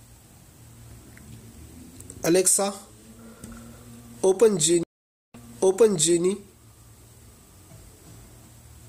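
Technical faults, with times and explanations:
4.83 to 6.22 s, stream reconnect: the connection dropped, so the player stopped delivering audio and the sound falls silent for about half a second (508 ms). It then reconnected and started a new decoder partway through the stream, and because the server resent a burst of earlier data, playback resumes 0.88 s behind where it cut off, so that stretch of sound is heard a second time. The fresh decoder's first frame fades in.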